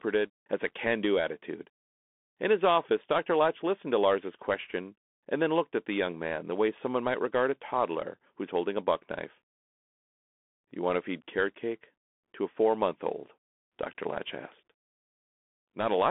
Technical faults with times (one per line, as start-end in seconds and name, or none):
0.00-16.10 Bluetooth CVSD headset codec